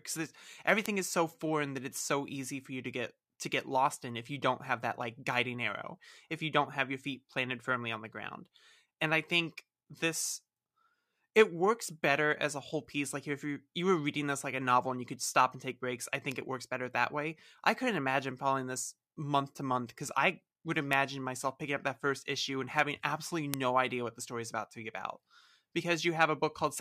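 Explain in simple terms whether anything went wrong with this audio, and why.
Four single sharp ticks stand out, at 0.86, 16.32, 20.93 and 23.54 seconds. Each is a bit error spike: one or two flipped digital values jump briefly, then snap back.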